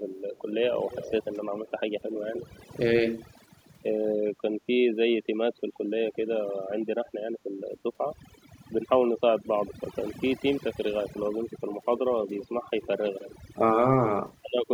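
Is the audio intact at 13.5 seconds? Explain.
No. From 13.5 to 13.83 s the speech dips sharply, by roughly 25 dB at its deepest, and drops out in pieces that add up to about a fifth of a second. This is speech suppressed in double talk, likely from an echo canceller that, with both ends talking at once, mistook this talker for loudspeaker echo and turned everything down.

The same moment also carries overdone noise removal. The background drops and breaks up into twinkling specks. A heavy-handed noise reducer is cutting frequency bands that fall close to its noise estimate, taking quieter parts of the speech with them.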